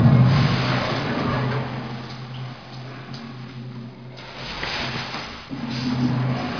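No technical faults can be heard anywhere in the audio, and the signal stays steady and intact from its opening moment to its final one.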